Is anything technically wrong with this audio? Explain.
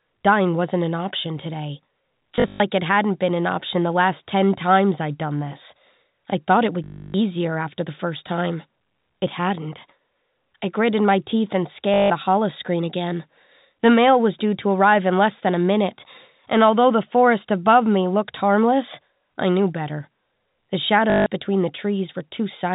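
Yes, there is packet loss with the last packet repeated, at 2.36 to 2.6 s after "wasn't an option today", at 6.84 to 7.14 s after "this I thought it", at 11.94 to 12.1 s before "the holoscreen again", and at 21.1 to 21.26 s. Lost audio was filled by replaying the previous packet. The repeats buzz at about 50 Hz, which fits 20 ms packets, giving a brief robotic stutter.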